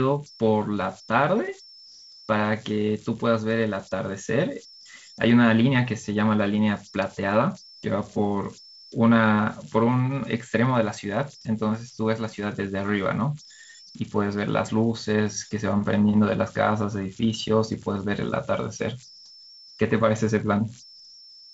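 Converter idle tones run through the whole clip. A delta-sigma converter working without dither settles into repeating bit patterns whenever its input is small, and those patterns turn into steady tones. Here the tone sits somewhere around 5 kHz, about 24 dB below the speech. It is heard as a whistle in the pauses and as a grainy edge beneath quieter syllables. The band-limited wideband telephone sound, with nothing above 7.7 kHz, fits G.722 coding at 48 kbit/s.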